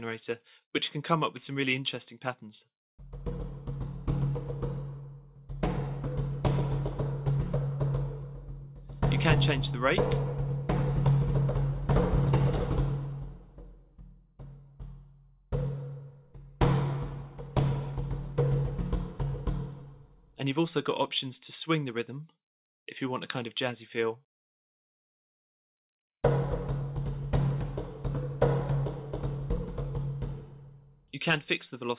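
No dropout, glitch, distortion or level problem is audible anywhere in the recording.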